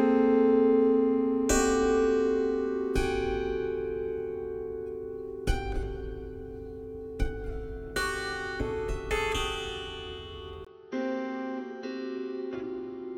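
At 10.65 s the audio drops out for a brief 20 ms gap, then continues to the end at 13.17 s with nothing above 6.1 kHz, roughly 10 dB quieter and with a faint new background noise. The likely cause is an input switched to a poorer device. A codec bandwidth drop would narrow the band alone; here band, level and noise floor all change together at a single gap.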